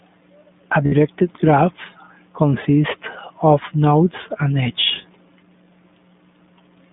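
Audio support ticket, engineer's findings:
iLBC codec across the whole speech clip: band-limited, roughly 150 Hz to 3.6 kHz, nothing up top, plainly audible coding damage, voice a bit rough and synthetic. Each frame's excitation coded on its own, consistent with the 15.2 kbps, 20 ms mode.

Lost iLBC frames at 0.86 s (60 ms gap, fits three lost frames) and 4.64 s (20 ms, about one frame): short held, slightly buzzy vowel where the decoder repeats the last pitch cycle mixed with noise. The voice snaps back right after, since each frame decodes on its own.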